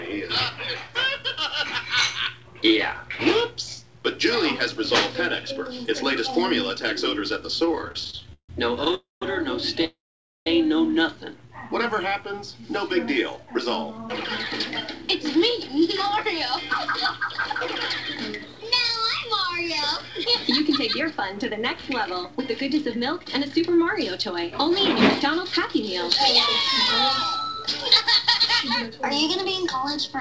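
The audio passes through a G.722 call path at 64 kbps with nothing above 8 kHz, and the trouble starts at 7.60 s with repeated stalls (stutter) that run to 9.84 s. Packets kept arriving late, so the jitter buffer ran dry 25 times. Each gap was bridged by continuing the last sound, about 429 ms in all and none of it lost, with the longest single gap 155 ms. That is roughly a fifth of the stretch spent on filler, and it gives a choppy, dragging feel. Unlike a freeze, this is many brief hiccups rather than one hold.

Two call audio freezes sit inside and just after that stretch, at 8.95 to 9.22 s (269 ms, with 160 ms fully silent) and at 9.85 to 10.47 s (614 ms, with 500 ms silent). Each was likely caused by packets being held up long enough that the held sound faded out. The audio then resumes where it stopped, so the clip gets longer by those amounts rather than losing anything. What sets these apart from the stutter is the single extended hold that dies into silence.

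A jitter buffer slow-down follows at 11.47 to 12.75 s. Here the receiver rebuilt its reserve by repeating single pitch periods, adding 89 ms and playing at about 94% speed. There is no gap, only stretched, slightly drawn-out sound at unchanged pitch, and that is how it differs from a freeze.

Jitter buffer speed-ups then run from 15.15 to 21.51 s and from 24.31 to 30.16 s, at about 102% speed. They trim roughly 150 ms and 100 ms respectively by cutting short pitch-period slices to shed excess delay. The pace runs slightly faster with the pitch intact, the mirror image of the slow-down.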